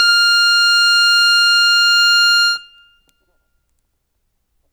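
No faults in this music.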